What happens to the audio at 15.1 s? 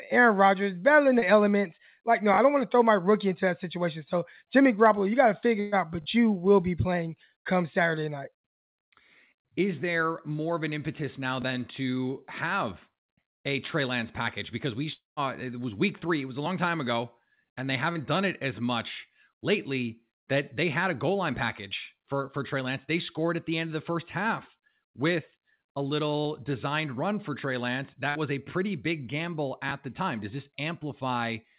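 At 15.1 s the audio is inside a long network dropout, running from 14.93 to 15.20 s. The likely cause is that packets stopped arriving for about 0.24 s. The receiver fills the gap by stretching the last sound into a buzzy hiss that fades away. About 0.16 s of that stretch ends up near-silent. The sound then resumes, with the lost portion gone for good. Throughout, the call path cuts off everything above 4 kHz.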